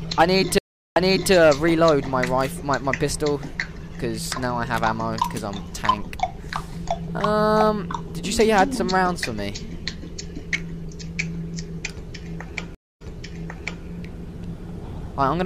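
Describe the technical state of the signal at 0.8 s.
A stream reconnect spans 0.58 to 1.32 s, so at 0.8 s the signal is inside the dropout. The connection broke, playback stopped, and the player reconnected and started a fresh decoder partway through the stream. You hear a gap of 368 ms of silence. When sound returns, it picks up 372 ms earlier than where it broke off, so a short stretch that was already heard plays again.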